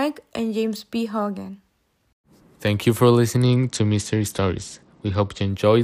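Right after "you for", at about 3.36 s, there's a Bluetooth SBC bit pool drop lasting until 5.50 s. The link got squeezed, so the encoder starved the upper sub-bands. Speech goes dull and gritty, which fits a fall from bit pool 31 to about 10, near 77 kbps.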